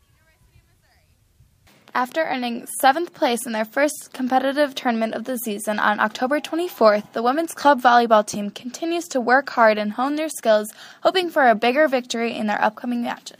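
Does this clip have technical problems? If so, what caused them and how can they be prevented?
No, nothing stood out as a technical problem on listening, so there is no cause to trace and nothing that needs preventing.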